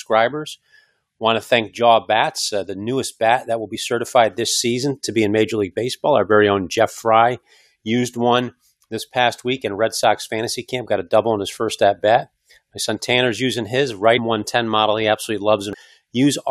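Damaged data in a compressed stream interrupts this speech clip: corrupted frames make the decoder misread the bitstream and hunt for the next valid frame header, producing brief chirps or blips at 3.72–3.75 s, about 14.17 s and about 15.73 s.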